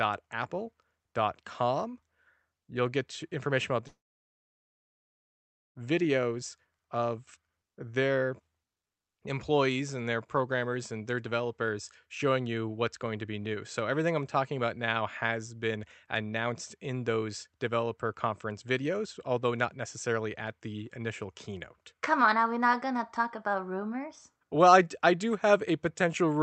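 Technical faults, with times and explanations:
3.87 to 5.78 s, long network dropout: the speech cuts out for nearly two seconds. Right at the break a short buzzy tail continues the last sound and fades, then about 1.8 s of near-silence with only a faint steady floor. This is most likely packets that never arrived, with the receiver concealing the gap until it gives up. The speech resumes later with that stretch simply missing, and the band-limited tone, topping out near 8 kHz, fits an Opus call path.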